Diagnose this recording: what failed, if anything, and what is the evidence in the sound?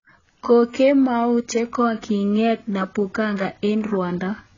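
The codec stage failed: the speech has heavy AAC compression damage for its whole length, likely from AAC-LC at a very low bitrate, around 16 kbps. Nothing survives above about 7.1 kHz, so the sound is dull, and sibilants and sustained sounds come out smeared, warbly and fizzy.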